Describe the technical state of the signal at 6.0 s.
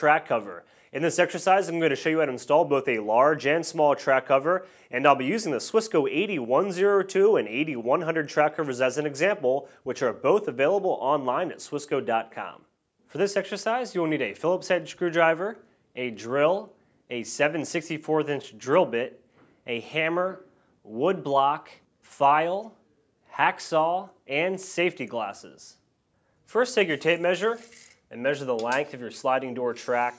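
At 6.0 s the signal is intact, with no dropout, clipping, distortion or other technical fault audible at that moment.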